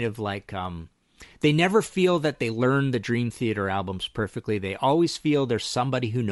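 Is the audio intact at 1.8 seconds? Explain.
No. At 1.8 seconds the speech carries Bluetooth LC3 compression damage, present throughout the clip. The likely cause is a low-rate LC3 link. It discards much upper spectrum and fills it with noise. The result is a breathy, grainy edge, consistent with roughly 48 kbps in short frames.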